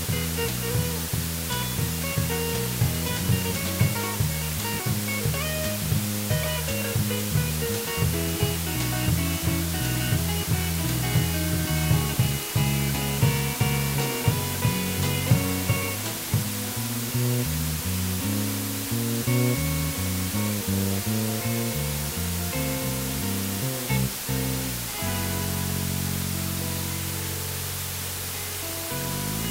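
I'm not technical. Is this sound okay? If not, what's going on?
No. Low bit depth with dither runs throughout. With only four bits, a steady, even hiss sits nearly as loud as the sound.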